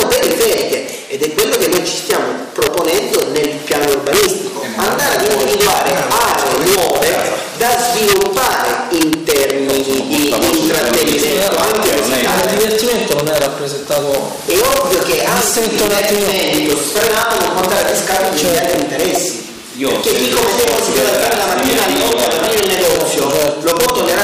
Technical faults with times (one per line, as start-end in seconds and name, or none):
0.00-24.23 integer overflow